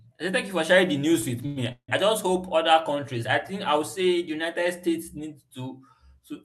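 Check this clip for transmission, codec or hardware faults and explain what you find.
Two network-timing faults appear in this speech clip, both adding time rather than losing any.

A short stall from a late packet at 1.46 to 1.58 s holds the last sound for about 98 ms while the buffer waits, then resumes where it left off.

A call audio freeze at 1.72 to 1.90 s, likely from delayed packets draining the jitter buffer, lasts 164 ms: a fading buzz, then about 90 ms of silence before "just hope other countries". The silence sets it apart from the stall.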